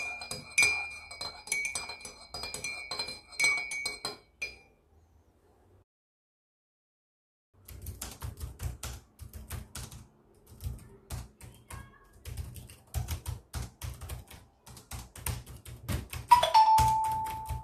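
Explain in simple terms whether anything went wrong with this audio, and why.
Around 5.82 s the sound drops out to silence and picks up again at 7.54 s, right where it left off. That's a rebuffering stall: the player ran out of downloaded audio and waited for more, so nothing's missing, but about 1.7 s of dead air got added.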